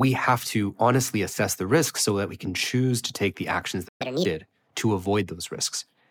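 The clip is speech with a playback stall. At 3.88 s the sound cuts out mid-flow and stays silent for 120 ms, until 4.02 s. The player likely ran dry of data or had its thread blocked, so nothing reached the output. Catch-up at higher speed follows straight away. From 4.02 to 4.26 s the speech runs at 1.5 times normal speed, and the pitch rises by about seven semitones. The player is resampling its backlog to win back the lost time. Then speed and pitch drop back to normal.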